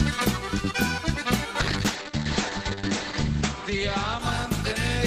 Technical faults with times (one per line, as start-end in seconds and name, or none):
1.60-5.06 call bitrate drop